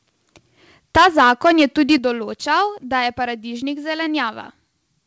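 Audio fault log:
0.96–1.96 s, microphone overload: For about a second the loudest peaks are flattened, with roughly 5% of the waveform pressed against the converter's ceiling and the signal pushing about 10 dB past what it could hold. The flat-topped peaks add a harsh, crackling grit to the loudest syllables. The cause is likely a microphone input level set too high for the talker. The overload ends just before "določal da je paradižnik".
0.97 s and 1.98 s, microphone volume stepped down: The whole sound, voice and background together, drops abruptly twice. The first step is about 4 dB, just after the distortion begins. The second is about 8 dB, right before "določal da je paradižnik". Each drop is an instant shift rather than a fade. This is likely the call software's automatic gain control cutting the device's input volume after it detected the clipped peaks. The band ending at 8 kHz fits a G.722 call path.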